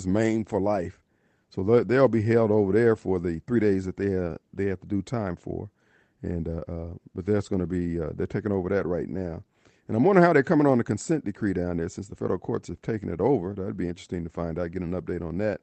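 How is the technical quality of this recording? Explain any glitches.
No glitches in the speech; the audio shows the usual call-codec character, with content rolling off around 8 kHz.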